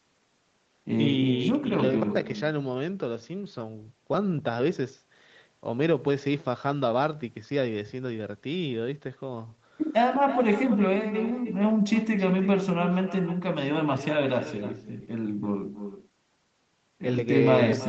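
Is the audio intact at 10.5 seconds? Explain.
No. At 10.5 s the echo with no canceller is present, as it is throughout. The far end's loudspeaker feeds back into its microphone and nothing removes it, so each phrase is trailed, roughly a third of a second later, by a thinner copy about 11 dB below the direct sound.

Clock drift between sender and receiver also runs through the whole clip, and 10.5 s sits inside it. The sender's clock is running a few percent fast, roughly five, so the receiver's jitter buffer keeps filling up and has to shed material to stay in step. The result is a faintly unsteady pace rather than one obvious break.

That shedding is heard as repeated timing corrections spanning 0.04 to 17.19 s, which covers 10.5 s, with the playback pushed along at 105% speed. Small pieces are cut at uneven intervals, always in the same direction, giving slight hiccups and an unsteady tempo.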